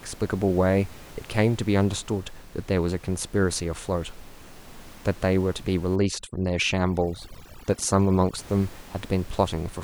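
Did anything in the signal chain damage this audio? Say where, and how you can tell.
Yes: overdone noise removal, 5.96 to 8.38 s, in call processing. Bands near the noise estimate are cut, leaving the background broken into twinkling specks.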